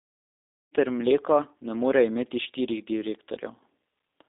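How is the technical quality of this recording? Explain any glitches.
The recording carries audible low-bitrate telephone codec damage from start to finish, though the gentle fade-in, from around half a second to 0.75 s, is clean.

G.729 codec, throughout: the speech is rebuilt from a vocal-tract filter, a pitch predictor and a few pulses per frame, which fits an 8 kbit/s G.729A stream. The band is squeezed to 300 Hz–3.7 kHz, so the speech sounds thin, rough and plainly synthetic.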